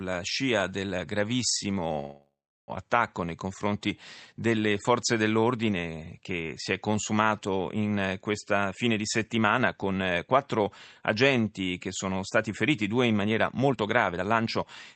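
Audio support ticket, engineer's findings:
Call audio freeze, 1.99–2.71 s. Last sound extended and fading into about 0.37 s of silence. Audio resumes where it stopped, with nothing lost. Likely cause: packets held in transit, jitter buffer ran dry. Concealment filled 0.69 s, adding 0.69 s delay.

Jitter buffer speed-up, 8.67–10.79 s. Sound runs 111% fast at unchanged pitch, audibly hurried. Receiver trimmed pitch-period slices repeatedly to drain the excess buffer, roughly 0.2 s total.

Jitter buffer speed-up, 13.50–14.93 s. Stronger, at 118%, same pitch, clearly rushed. Same mechanism, roughly 0.3 s removed. Opus band limit near 8 kHz throughout the call path.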